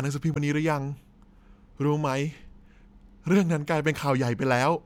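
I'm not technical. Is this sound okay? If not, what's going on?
No. Right near the start of this speech, from about 0.33 to 0.38 seconds, there's a brief chirp or blip, a glitch about a twentieth of a second long. That's damaged data in a compressed stream: a small piece of the compressed file got corrupted. When the player reached it, it couldn't make sense of that bit, lost its place, and had to hunt for the next readable chunk. The stumble is the noise you hear.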